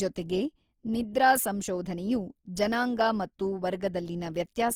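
A speech clip with plainly audible Opus compression running the whole way through: the speech turns grainy and rough, with noisy fill rather than holes, yet the top end still reaches about 20.3 kHz. That's likely the music-mode encoder at roughly 24 kbps.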